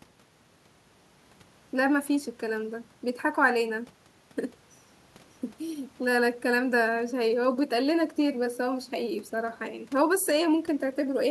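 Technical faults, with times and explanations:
No technical faults can be heard in this clip.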